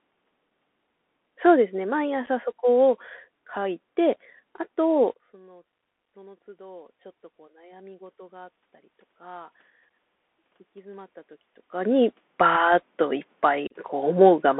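Bluetooth CVSD headset codec, throughout: the speech is confined to roughly 200 Hz to 3.5 kHz, and the one-bit slope coding leaves plainly audible granular hiss, scratchy sibilants and distorted loud peaks.

Unconcealed Bluetooth headset packet loss at 2.26 s: a 7.5 ms hole, about one packet's worth, drops abruptly to silence.

Automatic gain rising from 5.45 to 9.59 s: after the talker moves back around 5.0 s and the input falls by about 21 dB, the gain control slowly lifts level by about 5 dB, swelling voice and room noise together.

Unconcealed Bluetooth headset packet loss at 9.90 s: another 7.5 ms gap, fitting a single lost packet, cuts the audio sharply.

Unconcealed Bluetooth headset packet loss from 13.67 to 13.76 s: a longer 30 ms dropout, fitting a few consecutive lost packets, chops the speech with hard-edged silence.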